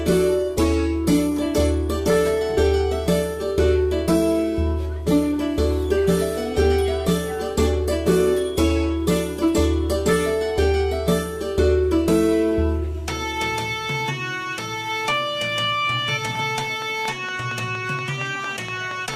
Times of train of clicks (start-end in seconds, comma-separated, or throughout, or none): 16.35-19.15